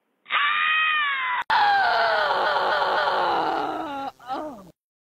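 From 0.0 to 1.5 s the audio is band-limited, with nothing above 3.8 kHz. It sounds dull and boxy, sits about 5 dB lower, and carries a faint extra noise floor well below the signal. An 80 ms gap marks the change. The likely cause is an input switched to a poorer device.

From 2.41 to 3.18 s there are repeated frames. A 256 ms block is played three extra times, giving an audible stutter. The decoder is replaying the same compressed data, which adds 768 ms to the clip's length.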